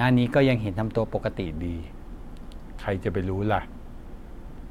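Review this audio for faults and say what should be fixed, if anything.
From 1.46 s to the end, a wrong sample rate slows the speech to 0.919× and drops pitch about 1.47 semitones, consistent with 48 kHz audio played at 44.1 kHz. On a spectrogram, harmonics and formants shift down and stretch in time. Prevent it by resampling to the device rate.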